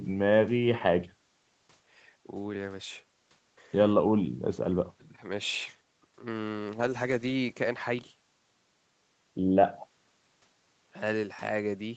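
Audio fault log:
No faults are heard in this speech. It carries the mark of a call path, with nothing above about 8 kHz, as fits a wideband Opus call at a modest bitrate.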